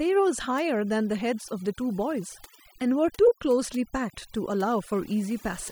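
Overdone noise removal runs throughout the speech. Aggressive noise reduction mutes bands near the noise floor, leaving a lowered background with twinkling specks.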